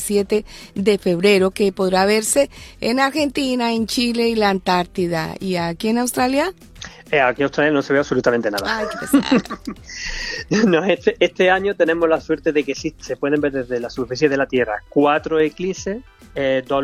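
No technical faults can be heard anywhere in this recording.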